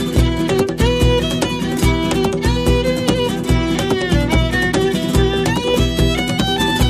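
Nothing to report: no dropouts, glitches, level problems or distortion are audible at any point in the clip.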